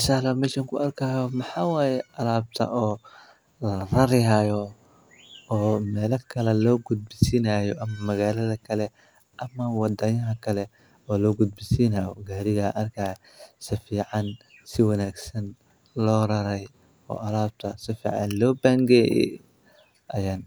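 Listening through the speech, nothing stood out as a technical problem at any point.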